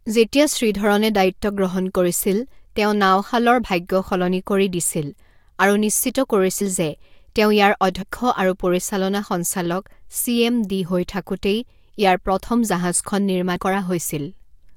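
At 6.60 s the speech jumps forward, and it happens again at 8.01 s and 13.55 s. That's compressed frames skipped: a run of encoded frames either never made it into the file or got thrown out by the decoder as damaged, so playback leaps ahead. The gaps sound like around 70 ms, then nearer a tenth of a second, then about 70 ms again.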